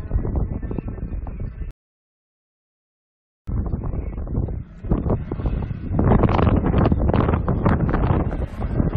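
At 1.71 s a rebuffering stall cuts the sound to silence until 3.48 s, adding about 1.77 s as playback waits for data. Unlike a dropout, nothing is skipped: the audio resumes exactly where it stopped, so only time is added.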